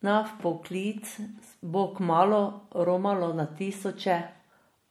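Speech that carries plainly audible MP3 compression damage from start to finish, likely from an encoder running short of bits, with the sound fitting a rate near 64 kbps. Weak frequency lines drop in and out between frames, giving a watery, swirling texture with chirpy s sounds and smeared attacks. On a spectrogram this shows as speckled, blotchy gaps.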